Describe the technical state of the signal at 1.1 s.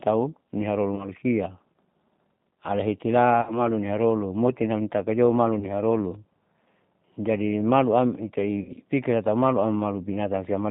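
VoIP packet loss concealed by the speech codec runs from 0.96 to 1.09 s, just after "tahu niharoru", so 1.1 s falls at its tail. About 20 ms of audio, consistent with a single lost packet, was replaced by the decoder repeating its last pitch period and filter shape at falling gain. That gap is heard as a brief buzzy, smeared stretch. Because each frame is predicted from the previous one, the speech stays weakened and distorted until the decoder recovers at about 1.09 s.

The G.729 codec is also present across the whole clip, including this moment, and its damage is plainly audible. The speech is rebuilt from a vocal tract filter, a pitch predictor and a few pulses per 5 ms half-frame, at a rate consistent with 8 kbit/s. Nothing above 4 kHz survives, which makes the sound dull and narrowband. The sparse pulse excitation adds a rough, slightly synthetic texture to the speech.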